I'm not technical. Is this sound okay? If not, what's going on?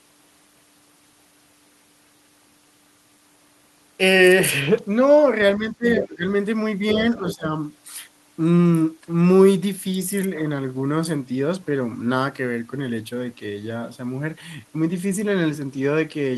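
No. From 5.56 to 6.25 s and again from 6.93 to 7.47 s, the voice suddenly gets quieter and patchy, as if someone briefly turned it down. This is speech suppressed in double talk, likely caused by both sides talking at once so the echo-cancelling system turned everything down.

During those same moments, a faint second voice slips in, from 5.97 to 6.06 s and from 7.16 to 7.35 s. This is the other side's voice leaking through, likely the far end playing from the loudspeaker and not being fully removed before reaching the microphone.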